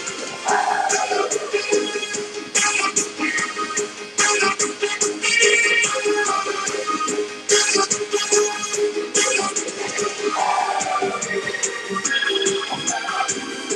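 No technical faults can be heard in this audio.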